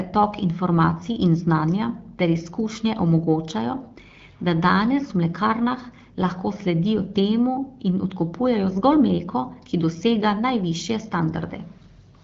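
No technical faults can be heard in this recording.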